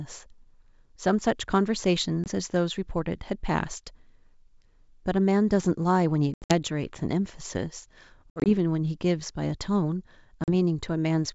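Packet loss on the ADPCM call drops short silent holes at 2.24, 6.34 to 6.53, 8.30 to 8.52 and 10.44 s, each followed by a brief, slightly distorted recovery while the decoder's predictor resyncs.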